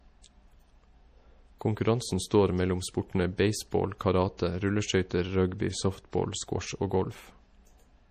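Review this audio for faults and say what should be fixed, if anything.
MP3 compression artefacts run throughout the speech, and the likely cause is MP3 encoding at a bitrate starved for bits, which fits roughly 40 kbps. Nothing survives above 14.9 kHz, where the encoder cut the treble. Below that, weak frequency lines drop in and out between frames, giving a plainly audible watery, swirling texture, with chirpy sibilants and softened consonant attacks. Prevent it by keeping a lossless or higher-bitrate master and encoding once from that.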